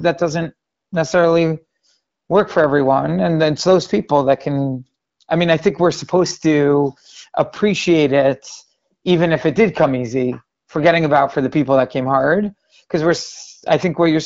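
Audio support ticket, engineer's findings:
No faults found in this speech.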